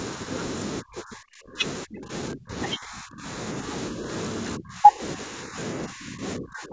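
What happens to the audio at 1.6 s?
At 1.6 s the speech dips sharply and breaks up, sometimes nearly vanishing, within a span from 0.81 to 4.09 s. The likely cause is speech suppressed in double talk: with both sides talking at once, the echo canceller mistook this talker for loudspeaker echo and turned it down.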